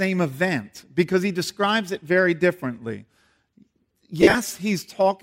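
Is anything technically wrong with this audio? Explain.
Yes. From 4.21 to 4.35 s the speech has lost LE Audio frames: about 97 ms of audio goes missing in scattered gaps across a 135 ms stretch, the longest run lasting around 40 ms. The gap pattern fits 7.5 ms LC3 frames. For each missing frame the decoder reuses the last good spectrum with randomised signs, fading it after the first few frames. The voice briefly turns into a noisy smear with no clear pitch.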